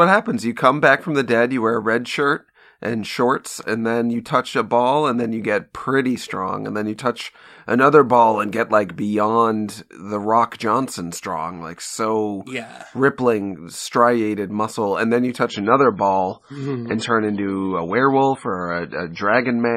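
Adaptive stream at a lower bitrate, from 15.49 s to the end at 19.76 s: the player abruptly switched to a leaner encoding, consistent with a drop from 128 to 24 kbit/s MP3. The speech loses everything above 10.5 kHz and gains codec artefacts, without any gap.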